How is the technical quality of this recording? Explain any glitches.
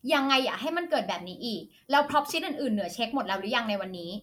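Nothing in this recording trips it up, so there are no glitches to explain.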